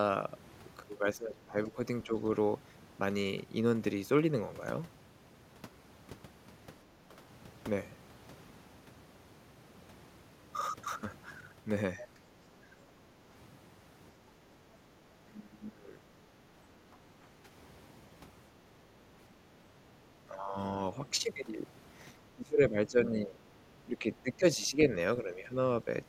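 The speech dips in pieces from 1.15 to 2.15 s and from 12.16 to 12.76 s, by roughly 10 to 15 dB. This is likely speech suppressed in double talk: the echo canceller takes the near voice for loudspeaker echo and turns it down. From 14.39 to 14.73 s only the room sound drops, by about 6 dB. This is background gated by the echo canceller. The speech suppression returns from 15.21 to 17.49 s (up to roughly 20 dB), from 19.58 to 21.04 s, and from 22.36 to 25.87 s.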